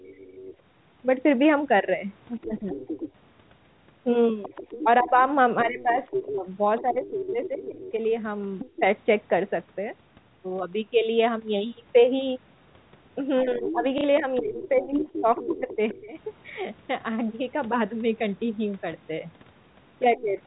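A speech call recording with three faults. The other side's voice leaks through at 0.0 to 0.56 s, 2.42 to 8.78 s and 13.65 to 16.0 s. It sits about 20, 10 and 15 dB below the talker. The likely cause is an echo canceller leaving loudspeaker sound in the microphone. Speech is also suppressed in double talk, at 0.04 to 0.15 s, 2.43 to 2.79 s, 4.81 to 8.82 s, 13.42 to 16.15 s and 20.16 to 20.4 s. The voice dips by up to about 15 to 20 dB. It is likely the canceller turning everything down while both sides talk. At 13.98 to 14.04 s, packet loss with the last packet repeated fills a 60 ms gap with a short robotic stutter. This fits two lost 30 ms packets. The narrowband G.711 telephone sound passes nothing above 4 kHz.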